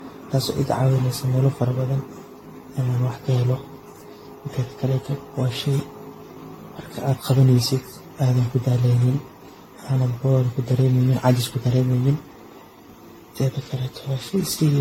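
From start to finish, the speech sounds swirly, smeared and hollow, with blurred attacks and nothing above 16.6 kHz. This is likely generation loss: around seven lossy re-encodes, each quantising afresh, compounding noise and spectral holes, which fits a 64 kbit/s AAC-LC chain.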